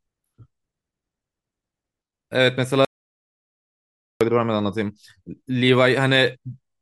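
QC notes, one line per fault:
2.85–4.21 s audio dropout to silence: speech cuts off for 1.36 s, a flat, silent waveform and blank spectrogram, likely from the input link dropping out.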